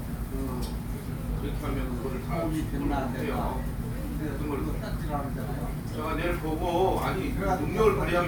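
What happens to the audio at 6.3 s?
Nothing goes wrong at 6.3 s; the sound carries on intact through that moment, with no dropout, click, distortion or other fault to be heard.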